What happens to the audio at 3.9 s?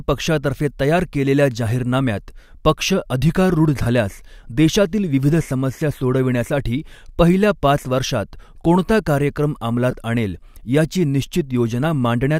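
Between 3.82 and 3.86 s, lost LE Audio frames cause a brief noisy smear of about 38 ms, consistent with five 7.5 ms LC3 frames. The decoder fills the gap by repeating the last spectrum with randomised signs, so unlike a plain dropout there's a hissy wash rather than silence.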